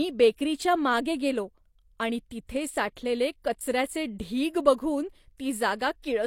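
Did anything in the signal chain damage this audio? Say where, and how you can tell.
Yes, the codec smeared a transient: pre-echo at 2.96 s, between "मागे गेलो आणि तिथे" and "कचऱ्याचे ढीग बघून". Quantisation noise sized for the attack spilled across its transform block, so a brief hiss of about 10 ms leads into the onset, which sounds softened.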